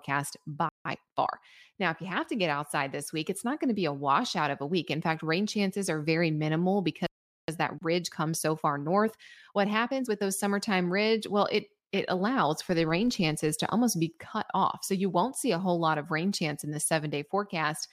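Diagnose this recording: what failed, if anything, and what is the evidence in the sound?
Playback stalls sit at the playback buffer stage. The speech drops out at 0.69 s for about 164 ms, then at 7.07 s for about 417 ms, right after "chances are very minimal". The likely cause is the player running dry or its thread being blocked.

Time-compressed catch-up follows each stall. From 0.85 to 1.49 s the speech runs 1.25 times fast. From 7.48 to 10.24 s it runs 1.15 times fast, ending at "summertime ridge". Pitch stays normal. Small cross-faded cuts trim the backlog.

A filter restarted on every block shows from 12.68 to 13.51 s, between "it it allows" and "to almost be cut". A 50 Hz buzz rides on the speech and follows its level. Each block starts from zero state and adds a transient. This points to 20 ms blocks in the processing chain.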